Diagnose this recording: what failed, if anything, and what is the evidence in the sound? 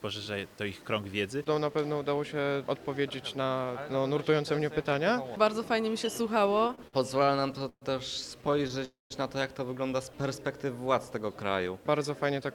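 Repeated stalls (stutter) at the network and jitter buffer stage: from 6.39 to 7.84 s the sound catches 17 times, with about 341 ms filled and the longest hold 126 ms, then 8 briefer catches from 8.42 to 8.83 s. Late packets kept emptying the buffer, and the receiver stretched the last sound each time. Nothing is lost, so it drags rather than skips.

Call audio freeze from 8.85 to 9.12 s: a single held stretch of about 255 ms, ending in roughly 160 ms of silence. It then resumes exactly where it stopped. The likely cause is packets delayed long enough for the buffer to run dry and the concealment to fade out. One long gap sets it apart from the stutter's many short catches.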